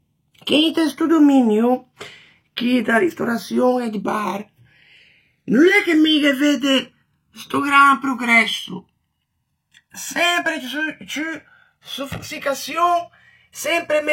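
From start to finish, the speech has channels drifting apart. The left and right sides seem to run on separate clocks that disagree by around 150 parts per million. The gap between them widens slowly and reaches about 2 ms by the end. Summed to mono, the two copies cancel at regularly spaced frequencies. Those comb notches glide through the spectrum as the delay grows. The result is a slow, hollow flanging sweep over the voice.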